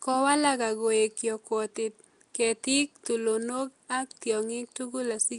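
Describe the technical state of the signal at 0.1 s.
At 0.1 s the speech already carries the rough, hissy halo and smeared, underwater blur of Nellymoser compression, which runs through the whole clip. The likely cause is Flash's Nellymoser Asao codec, whose fixed, thin bit budget leaves weak bands unfunded and fills them with noise. Nothing is heard above 10.6 kHz. Unlike the swirly, warbling holes of a starved MP3, the gaps here are padded with steady hiss rather than left empty.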